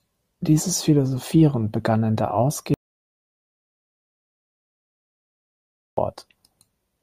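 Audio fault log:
2.74–5.97 s, audio dropout to silence: the speech breaks off mid-flow and about 3.23 s of silence follow before it resumes just as abruptly. The input was likely lost through a disconnected device, failed link or stray mute while recording continued. Unlike a noise gate or a pause, the gap holds no room tone, hiss or fade at its edges, and nothing of what was said during it survives.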